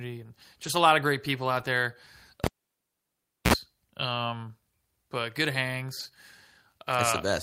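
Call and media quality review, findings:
Lost packet rebuilt from error correction at 0.63–0.69 s, 1.59–1.61 s and 5.99–6.09 s. No gaps, but brief rough, noisy patches of 40, 20 and 60 ms. Fits Opus in-band FEC. Lost frames were replaced by lower-bitrate copies carried in the following packets.

Cable pulled and plugged in at 2.44–3.54 s. A pop, then about 1.04 s of near silence. Then a 58 ms burst of 60 Hz mains buzz as the tip made contact, and a second pop on reconnection. Points to a live input jack being reseated.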